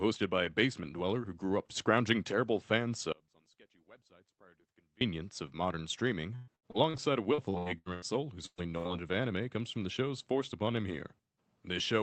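After "up scrounging terrible fan", at 3.12 s, the signal abruptly falls away for about 1.9 s to a faint residue about 30 dB down until "of modern streaming" at 5.01 s. This is an audio dropout, likely from a break in the path that left the input live. The waveform collapses to a thin band and the spectrogram goes nearly blank.

From 6.35 to 8.05 s, between "of modern streaming" and "soul whose", repeated packet loss makes the sound choppy and robotic. About a third of the span is concealed across ten gaps, the longest 120 ms. The spectrogram shows smeared, stretched harmonics between notches.

Two bursts of packet loss follow, at 8.46 to 8.61 s just after "soul whose" and at 8.78 to 8.88 s, with about 120 ms and 80 ms missing. Each appears as the last sound held and fading away, with the first trailing into about 60 ms of silence. All of this rides on the Opus call path, whose upper limit near 8 kHz shows as a hard ceiling on the spectrogram.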